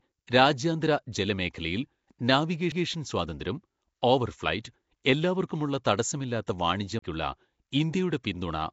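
Speech, and the whole clip has a rough, hissy halo with a smeared, underwater quality. Nothing is heard above about 7.7 kHz. This is likely Nellymoser compression, the old Flash microphone codec, and the damage is plainly audible, in keeping with a rate near 32 kbps. Weak bands get no bits and are filled with noise, which gives the hiss. At 2.72 s a CD skip gives a very brief mute, then the sound jumps to another point, just before "സ്വാതന്ത്ര്യം ഓവർ ഫ്ലൈറ്റ് എല്ലാവർക്കുമുള്ള". A second CD skip runs from 6.99 to 7.02 s, with a mute of about 30 ms. In both, the laser has jumped to another turn of the disc's spiral and playback resumes from a different place. At 6.47 s there is pre-echo. A hiss of about 15 ms comes just before a sharp attack, and the attack sounds soft. The codec spread its noise across the whole block, so the quiet moment before the attack was filled too.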